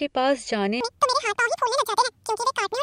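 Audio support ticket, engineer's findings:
Wrong sample rate, 0.81 s onward: speech twice as fast, an octave high; fits 22 kHz audio played at 44.1 kHz. Spectrogram harmonics spread twofold.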